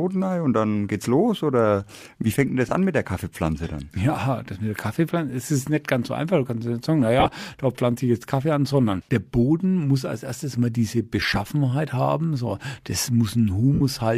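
Lost LE Audio frames at 2.69 s (after "wie fängt denn das"), 7.20–7.31 s, 11.20–11.37 s and 13.74–13.81 s: the decoder repeats the last spectrum with scrambled phase, leaving brief noisy smears, scattered in the longer bursts.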